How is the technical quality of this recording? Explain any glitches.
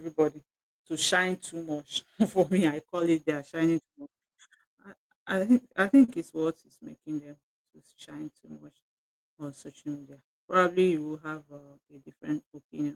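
The recording has one glitch, a short run of repeated stalls.

From 5.63 to 6.46 s, just before "is making them", repeated stalls (stutter) cause seven brief hitches. Packets arrived late, the jitter buffer kept emptying, and the receiver stretched the last sound. Gaps reach 40 ms, about 107 ms in total. Nothing is lost, but the speech drags. A spectrogram shows smeared, repeated frames, and the waveform shows stretched segments.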